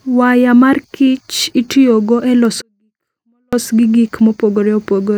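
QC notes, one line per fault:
2.62–3.53 s, 24-bit alignment error (too quiet): the speech drops abruptly by about 48 dB, staying clean but nearly inaudible, then returns at full level. Samples held in the low 24 bits of each 32-bit word were read as full 32-bit values, shrinking every sample's scale.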